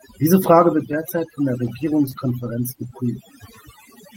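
Overdone noise removal runs throughout. Bands near the noise estimate are gated away, leaving near-silent gaps with twinkling specks, seen as a speckled, hollowed-out spectrogram.

From 0.93 to 2.85 s, eleven lost packets are rebuilt from error correction, each 20 ms and rougher than the surrounding audio. The first lands just before "von der", another near 1.17 s before "von der" again, and one at 1.63 s right after it. On a spectrogram each shows as a short noisy slice.

At 2.09 to 2.13 s, a short concealed packet loss leaves 20 ms synthesized from the preceding sound. It is heard as a brief smear and appears as a smooth, repeated-looking patch in the waveform.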